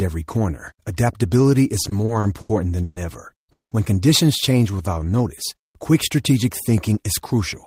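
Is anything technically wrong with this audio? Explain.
Yes. The audio has three distinct network-delivery faults.

From 1.83 to 2.98 s, just after "every corner adaptability is", there are repeated stalls (stutter). Packets kept arriving late, so the jitter buffer ran dry six times. Each time the receiver stretched the last sound to fill the wait, about 310 ms in total and roughly a quarter of that stretch, with the longest fill 130 ms. Nothing is lost, but the speech drags and hiccups. On a spectrogram, the formant bands smear into flat horizontal streaks at each stall, and the longer streaks fade out.

From 3.52 to 3.73 s there is a call audio freeze. The sound holds as a brief buzz that decays, then about 150 ms of silence, before the speech resumes where it stopped, 190 ms later than it should. The likely cause is a single burst of delayed packets that emptied the buffer, after which playback carried the added delay. 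The waveform shows a short decaying tail, then a flat line. The spectrogram shows a blank vertical band with no missing content on either side.

From 4.52 to 5.22 s, leading into "quick strategic thinking is", a jitter buffer slow-down is audible. The receiver repeated individual pitch cycles to rebuild its reserve, adding about 123 ms and playing that stretch at 84% speed. Pitch stays the same, but vowels sound drawn out. In the waveform, identical periods repeat back to back. On the spectrogram, the harmonic spacing is unchanged while the features are stretched horizontally.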